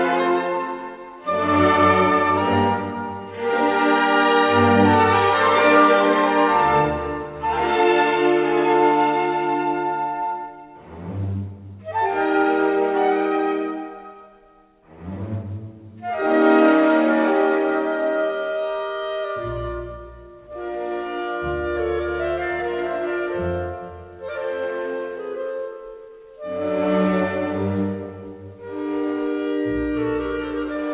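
No technical faults are audible.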